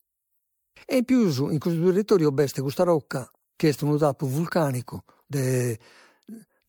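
Speech runs through the whole clip with a swirly, hollow, smeared quality and softened consonant attacks, the signature of generation loss. The likely cause is repeated MP3 re-encoding, around five passes at a rate that points to 96 kbit/s, each pass quantising on a shifted frame grid so noise and gaps accumulate. A spectrogram would show patchy holes and flickering blocks across the upper bands with nothing above about 20.2 kHz, and the waveform's transients would look rounded rather than sharp.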